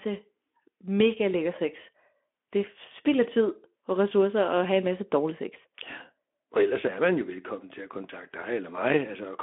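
No technical faults can be heard in this speech recording, which comes through as narrowband telephone-band audio carried by the Speex codec, with nothing above about 3.7 kHz.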